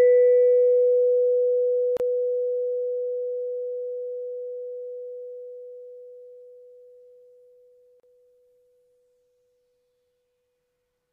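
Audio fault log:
1.97–2.00 s and 8.00–8.03 s: gap at a join of encoded pieces. The music breaks off in a gap of about 31 ms and then about 34 ms, six seconds apart, and resumes exactly where it stopped. The repeat spacing points to the audio being encoded in 6 s pieces and butted together untrimmed, so each piece's encoder start-up delay and final-frame padding survive as dead air. The edges are smeared by the codec.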